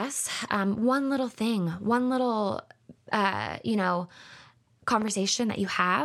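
Right near the end, from about 5.02 to 5.10 s, there's a loud pop. It's actually two pops in quick succession, landing about 10 dB above the speech, which keeps going underneath. That double hit is most likely a voltage spike, maybe from a plug, a switch, static discharge or a driver hiccup, getting into the signal path, with the downstream circuitry smearing it into that short, sharp thump.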